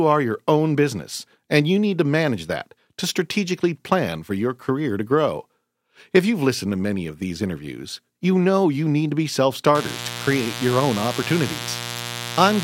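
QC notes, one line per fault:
9.75–12.63 s, mains buzz: right after "need to be self" a steady, raspy buzz kicks in and stays until the clip ends, sitting fairly loud, only around 10 dB under the speech. It's built on 60 Hz. Something like a dimmer, rectifier or unshielded run is letting sharp switching spikes in twice per mains cycle, so you get a dense stack of 60 Hz harmonics climbing into the kHz range, which gives it that gritty edge rather than a clean hum.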